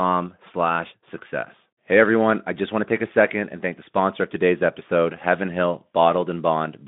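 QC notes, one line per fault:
No faults found in the speech; nothing to log.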